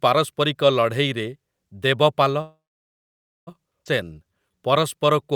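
At 2.41 s the speech halts in a call audio freeze lasting until 3.49 s. The last sound carries on briefly as a fading buzz or hiss, then about 0.9 s of silence. The packets were likely held up in transit and the jitter buffer ran dry. Unlike a dropout, nothing is lost: when audio resumes it picks up exactly where it stopped, so roughly 1.06 s of extra time has been inserted.

From 3.85 to 3.88 s comes a skip ahead, the opposite case. A stretch of about 0.7 s of speech was discarded while later audio was already waiting, and the two sides are butted together with only a 6 ms join. There is no audible pause, just an abrupt jump in the speech, and it claws back much of the delay the freeze added.

From 4.04 s to 5.27 s a jitter buffer slow-down stretches the speech. The receiver repeated single pitch periods and fragments of pauses to rebuild its reserve, adding 149 ms and playing at 88% speed. 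Sounds are drawn out, but the pitch stays the same. That separates it from a tape-style slowdown, where the pitch would fall too.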